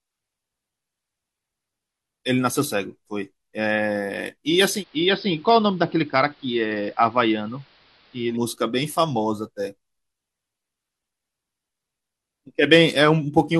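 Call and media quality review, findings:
Digital radio blending to analogue, 4.73–8.38 s: AM fallback, hiss roughly 30 dB down, about 2 dB quieter, 108 ms cross-fades. Hiss separates it from a codec bandwidth drop.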